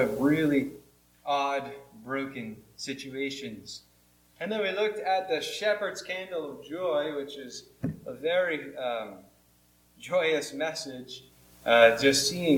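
Zipper noise from 0.44 to 0.92 s: the level drops about 15 dB in unsmoothed 2 dB steps, each ticking; the waveform shows a staircase, the spectrogram vertical lines.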